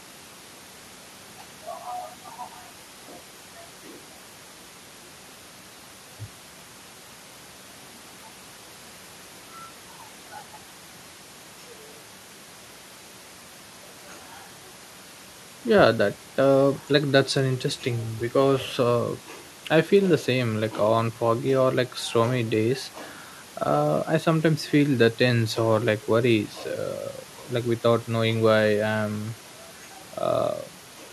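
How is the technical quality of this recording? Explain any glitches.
The recording has no glitches, and the only thing beneath the speech is the ordinary background noise of the room, sitting about 26 dB below it.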